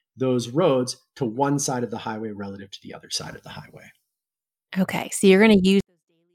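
From 5.80 s to the end of the clip at 6.35 s, the speech suddenly drops to a near-whisper, about 48 dB quieter, yet stays clean with no distortion or noise. This is a 24-bit alignment error (too quiet): 24-bit samples sitting in the low bytes of 32-bit words were read as full 32-bit integers, so every value lands 256 times too small and the level collapses at once.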